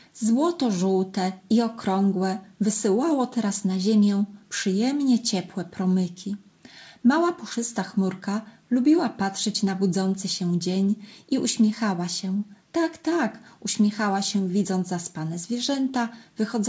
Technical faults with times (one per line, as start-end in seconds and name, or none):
none